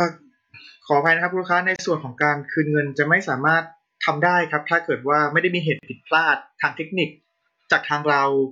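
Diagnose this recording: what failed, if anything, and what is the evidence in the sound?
The codec stage failed, specifically where separately encoded pieces were stitched together: there's a gap at a join of encoded pieces. The speech drops out to silence from 1.76 to 1.79 s (about 30 ms) and again from 5.79 to 5.83 s (about 40 ms), then picks up exactly where it left off. The edges are smeared. Those gaps sit 4.0 s apart, so the audio was encoded in 4-second chunks and concatenated untrimmed, leaving each run's start-up delay and end padding in.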